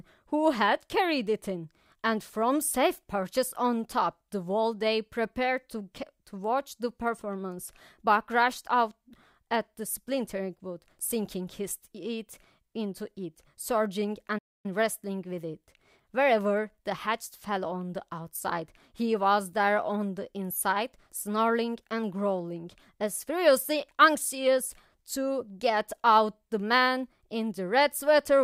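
A speech recording with one fault, a playback stall: the player likely ran short of buffered data or had its output thread held up, so the audio cuts to silence in mid-flow from 14.38 to 14.66 s, a gap of about 260 ms, before sound returns.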